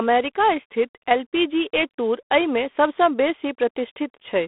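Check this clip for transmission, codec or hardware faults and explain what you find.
G.726 ADPCM coding affects the whole clip. Each sample is sent as a few bits of difference from a prediction. The harsh, rasping hiss that rises and falls with the speech fits 24 kbit/s. The band runs 250 Hz to 3.5 kHz. Nothing passes above 3.8 kHz.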